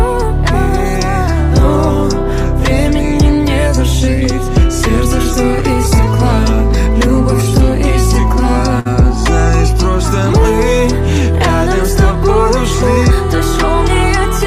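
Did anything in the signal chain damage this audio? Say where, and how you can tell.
Yes. The damage is at the network stage, a short stall from a late packet. At 8.79 s the sound stops moving forward and holds until 8.87 s. The held sound carries a slight buzz or dip. Then the audio resumes exactly where it paused. Nothing is skipped. A packet arrived late and the jitter buffer ran dry. The receiver stretched the last sound for about 59 ms to cover the gap. Everything after it plays 59 ms later.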